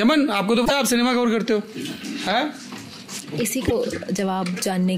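Damaged data in the compressed stream breaks the sound at 0.62 to 0.71 s and again at 3.65 to 3.72 s. Corrupted bytes make the decoder misread those frames and lose sync while it hunts for the next valid header, leaving a short chirp, squawk, click or hole each time.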